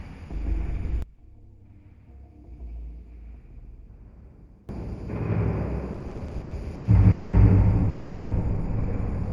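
From 1.02 to 4.69 s the sound drops by about 23 dB. This is likely one channel inverted. With one side's polarity reversed, the shared content cancels when summed to mono. Only the difference between channels survives.

From 5.93 to 6.87 s come repeated stalls (stutter). There are 16 brief holds, the longest 100 ms, totalling 340 ms. That is about a third of the span. Packets arrived late, the buffer kept emptying, and the receiver stretched the last sound. The audio drags and stutters. Nothing is lost.

Two call audio freezes follow, at 7.11 to 7.35 s and 7.89 to 8.33 s. They last 220 ms and 420 ms. Each time the last sound hangs on as a fading buzz or hiss, never reaching silence. Then the audio resumes where it stopped. The likely cause is packets held up in transit.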